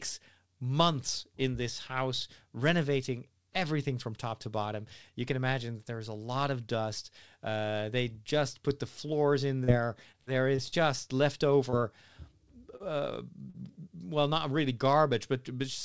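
Short concealed packet loss first appears at 9.64 to 9.70 s, just after "put the floors in". It recurs at 11.70 to 11.74 s, 12.76 to 12.82 s, and 13.50 to 13.56 s, just before "well not really". Each time, 20 to 40 ms of the call arrived too late. The receiver bridged the gap by extending the preceding sound and then blending back, which leaves a brief smear or wobble in the speech.

From 10.12 to 10.74 s, repeated packet loss produces a choppy, robotic stretch. Four separate gaps, the longest 51 ms, are patched in quick succession, so about a fifth of that span is synthesised continuation rather than real audio, with fragments of speech missing. The call path's bandwidth stops at 8 kHz throughout.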